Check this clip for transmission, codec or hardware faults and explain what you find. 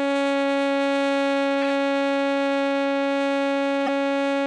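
Two bursts of corrupt frames decoded disturb the music, from 1.62 to 1.72 s and from 3.86 to 3.89 s. Flipped bits reached the decoder, which played them, spreading energy into the wrong frequencies: brief noisy chirps, roughly -15 dBFS, then a louder -10 dBFS blip, each suggesting a few damaged frames.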